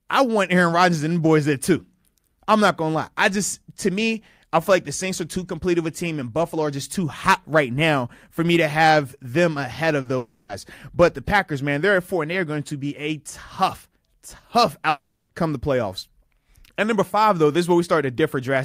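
Just after "to have them ahead", at 10.01 s, a short concealed packet loss fills 40 ms with extrapolated sound: a brief smear, seen as blurred harmonics on a spectrogram. Two stretches, 10.17 to 10.51 s and 14.89 to 15.31 s (before "come the playoffs"), become a fading buzzy or hissy continuation, likely a long network dropout, with flattened, repeating spectrogram bands.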